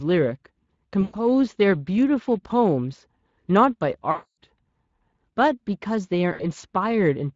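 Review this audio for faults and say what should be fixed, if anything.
Speex codec damage runs throughout: the speech is hoarse and noisy from too few excitation bits, consistent with roughly 20 kbps. A spectrogram shows smeared, grainy harmonics. Prevent it by encoding at a higher Speex quality or with a better codec.

VoIP packet loss concealed by the speech codec occurs at 1.01–1.15 s, 4.11–4.34 s and 6.33–6.44 s, covering about 120, 260 and 60 ms. The decoder extrapolates from its last pitch and filter while lowering the gain, which shows as decaying waveform amplitude across each gap. Prevent it with a jitter buffer, forward error correction or a more reliable network path.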